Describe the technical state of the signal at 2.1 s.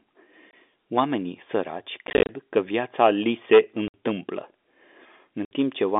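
Packet loss filled with silence hits from 2.07 to 2.29 s. About 120 ms of packets went missing, scattered in runs no longer than 30 ms. The gaps hold only silence, so the speech breaks into hard-edged holes just before "că viața li se".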